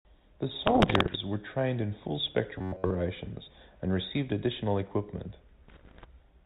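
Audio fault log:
0.62–1.19 s and 5.68–6.06 s, bit errors on an ADPCM link: pops and rough, gritty bursts with brief level jumps, just before "were trained in full" and just after "and received additional equipment". Something like a percent or two of bits flipped, and each one knocks the G.726 decoder's step size and predictor off, so the damage rings on for a few milliseconds.
2.58–2.95 s, robotic sound from repeated short buffers: right after "were trained in full" the speech turns into a stiff metallic buzz at about 94 Hz, with most of that stretch repeated. That's likely a roughly 10.7 ms buffer being replayed while fresh audio was skipped.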